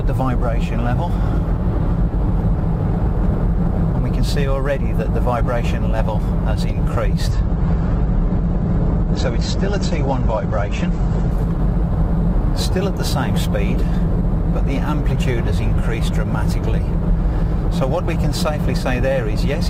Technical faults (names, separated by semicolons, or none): adaptive stream at a lower bitrate